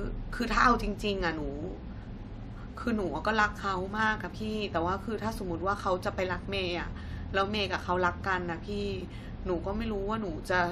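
Speech recording, and nothing is technically wrong with it.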